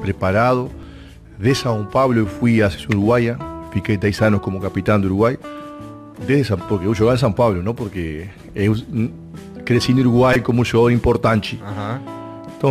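At 0.82 s, a repeated buffer gives one click. Audio arrived late, so a 5.8 ms piece played twice. At 10.33 to 10.36 s, four repeats make a brief buzz.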